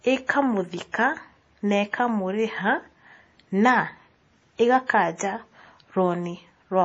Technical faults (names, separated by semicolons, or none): MP3 compression